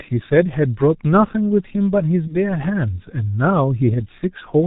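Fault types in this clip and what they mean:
G.723.1 codec, throughout: a low-rate telephony coder at 6.3 kbit/s, heavily damaging here, leaving muffled, hoarse speech with nothing above 4 kHz and smeared consonants.
VoIP packet loss concealed by the speech codec, 2.27 to 2.57 s: 30 ms went missing, fitting one dropped frame; the decoder extrapolated and faded it, and weak, distorted sound lingers afterward.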